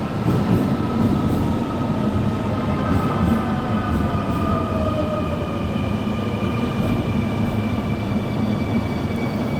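No technical faults can be heard anywhere in the recording.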